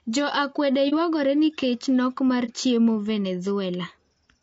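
Low-delay AAC compression runs through the whole clip and is the likely cause of the rough, grainy speech: short coding frames resolve harmonics poorly, and the damage fits a rate near 32 kbps. AAC frame loss with muting occurs at 0.89–0.94 s and 2.45–2.51 s. Each time, the decoder zeroed the missing stretch, leaving a brief faded dip of about 30 ms, consistent with one lost frame.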